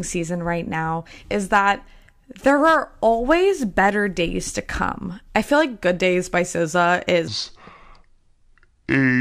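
A section at the wrong speed runs from 7.28 s to the end of this speech recording at 9.20 s. At that point the sound abruptly slows to about 0.67 times its original rate, and pitch drops with it by roughly seven semitones, so the final stretch turns deep and drawn out. Because speed and pitch shift together, the likely cause is that this tail was played back or resampled against the wrong clock.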